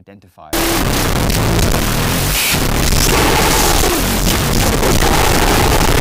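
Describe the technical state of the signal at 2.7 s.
At 2.7 s the speech is inside a wrong sample width fault running from 0.53 s to the end. The 16-bit samples are read as unsigned 8-bit, so each byte becomes its own sample. Half carry only low-order noise, leaving loud hiss over speech that plays at half speed, an octave low.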